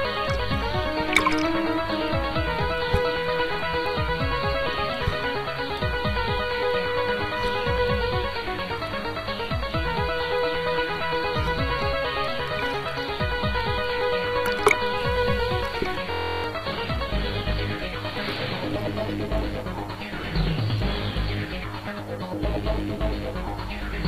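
A system hang loop runs from 16.12 to 16.44 s. Playback froze while the hardware kept cycling one 23.22 ms piece of audio, which fits a 1024-sample buffer, 14 times over. The result is a steady 43.1 Hz buzz that replaces roughly a third of a second of sound.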